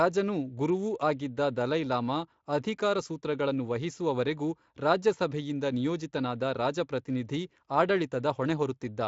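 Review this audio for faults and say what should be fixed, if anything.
No technical fault needs fixing here: the speech comes through a Speex codec path that sounds like it is running at a fairly generous quality setting, with only the light coding character expected of that codec.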